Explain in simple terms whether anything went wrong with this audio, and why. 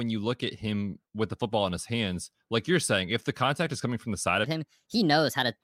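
A section at the wrong speed runs from 4.44 s to the end of the clip. At that point the speech suddenly plays 1.25 times faster than it was recorded, so it sounds hurried and the voice jumps up in pitch by roughly four semitones, higher and slightly chipmunk-like. Speed and pitch rise together because the sound is simply being run through quicker. The likely cause is that this last stretch was played back or edited against the wrong clock.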